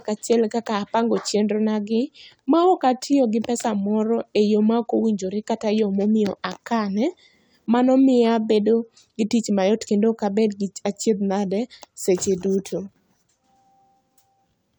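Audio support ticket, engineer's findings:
No audible fault found on listening; the recording presents no symptom that points to any component in the capture, processing or playback chain.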